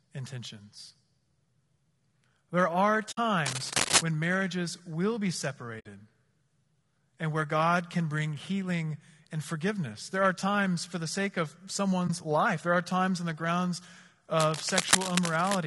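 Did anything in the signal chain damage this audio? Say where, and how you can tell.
Yes. At the codec stage, the speech was likely encoded with low-delay AAC compression (AAC-ELD), at a rate that fits about 32 kbps. Short frames resolve the voice's harmonics poorly, so throughout the clip the speech sounds plainly rough and grainy, with noise between harmonics and a thin, synthetic-sounding top band.

At the network stage, AAC frame loss with muting occurs three times. The decoder zeroed the missing spectrum, and the overlapping windows fade the sound out and back in. The result is soft-edged holes: 60 ms at 3.11 s and at 5.79 s, which fits three lost frames each, and a 20 ms gap at 12.07 s, between "for the sake of" and "life there are times".

In the analogue wiring, cable scratch noise appears twice. It is likely caused by a worn cable or connector being moved, so its contact resistance fluctuated rapidly. 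Dense, uneven scratching bursts, about as loud as the speech, cover 3.46 to 4.02 s, just before "when marriages will be", and 14.38 to 15.57 s, right after "times on the grounds".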